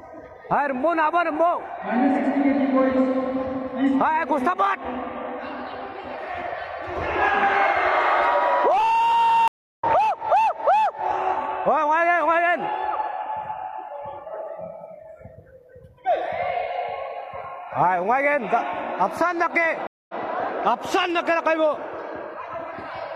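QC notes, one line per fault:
9.48–9.84 s and 19.87–20.18 s, stream reconnect: the decoder restarts mid-stream after gaps of 315 ms and 219 ms. The first resumes about 0.2 s later, skipping audio; the second backs up 93 ms, repeating a sliver.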